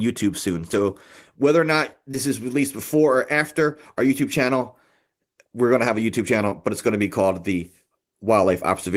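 Short concealed packet loss occurs at 2.11 to 2.15 s and 6.49 to 6.53 s. About 20 ms of speech arrived too late each time. The decoder extrapolated the last sound, leaving a brief smear.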